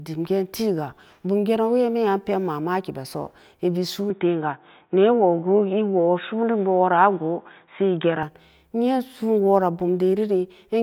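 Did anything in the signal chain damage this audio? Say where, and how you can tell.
Yes. From 4.10 s to 8.23 s the speech turns dull and boxy, with nothing above 3.8 kHz, a modest level shift and a faint new noise floor, then clears again. The clean cut with no gap points to the input likely being switched to a poorer device at the driver stage.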